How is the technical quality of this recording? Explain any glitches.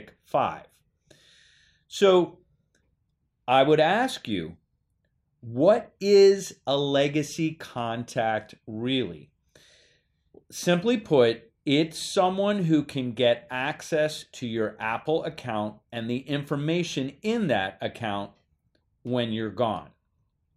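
No glitches or dropouts heard.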